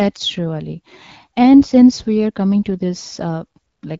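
Nothing faulty can be heard anywhere in this speech.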